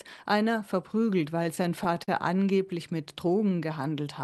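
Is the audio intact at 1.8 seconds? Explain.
No, 1.8 s falls inside a stretch of repeated stalls (stutter) from 1.43 to 2.39 s. Late packets kept draining the jitter buffer, so nine brief gaps, up to 41 ms, get patched over, and the audio drags and hiccups.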